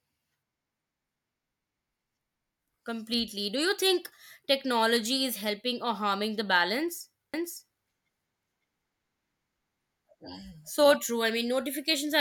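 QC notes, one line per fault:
7.34–10.96 s doubled audio track. The speech repeats about half a second late at equal level, then cuts out abruptly. A slower second capture path is the likely cause.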